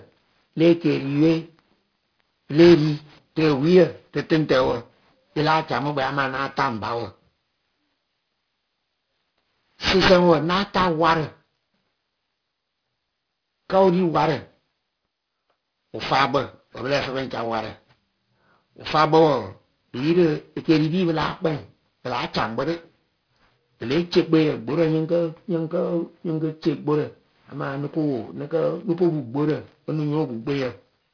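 All the way through, the speech has aliasing: it sounds downsampled to around 11 kHz with no filter first, so anything above 5.5 kHz folds back down. Sibilants go gritty and metallic, with the folded junk maybe 15 dB under the voice.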